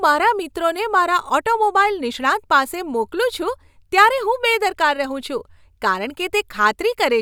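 Nothing in this speech recording stood out as a technical problem on listening.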